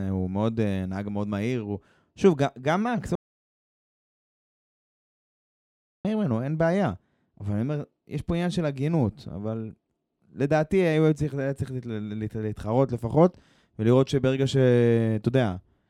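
At 3.15 s the speech cuts off mid-flow into an audio dropout to silence. No room tone remains. It returns abruptly at 6.05 s, so about 2.89 s is lost. The input likely dropped through a disconnect, link failure or mute while recording continued.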